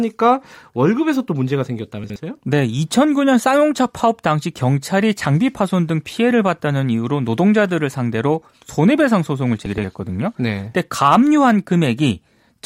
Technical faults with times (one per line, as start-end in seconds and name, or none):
2.04-2.16 chunks out of order
9.66-9.84 chunks out of order